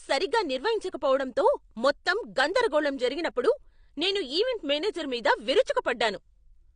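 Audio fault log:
throughout, AAC compression: The speech was likely squeezed through an AAC-LC encoder at a low bitrate, one that fits roughly 32 kbps. With too few bits to go round, the encoder trimmed the top of the spectrum, leaving nothing above 9.7 kHz, and quantised the remaining bands coarsely. The result is plainly audible damage: a dull, muffled voice whose sibilants turn smeared and fizzy, with a warble on sustained sounds.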